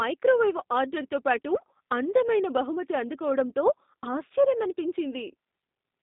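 From start to finish, G.729 codec damage is plainly audible. Band-limited to 200 Hz–3.7 kHz, the speech sounds rough and synthetic, typical of 8 kbit/s vocoding.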